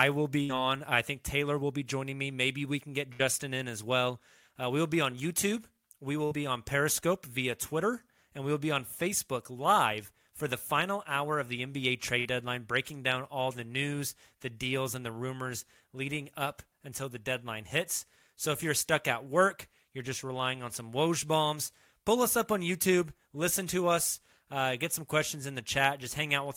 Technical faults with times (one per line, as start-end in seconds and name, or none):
0.43-0.52 burst of packet loss
3.13-3.22 burst of packet loss
6.25-6.34 burst of packet loss
12.19-12.28 burst of packet loss